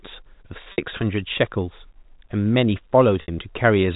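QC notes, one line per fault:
0.72–0.78 s and 3.22–3.28 s, packet loss with pitch repetition. Each 60 ms gap repeats the last pitch period while fading, so it sounds like a brief buzzy hold.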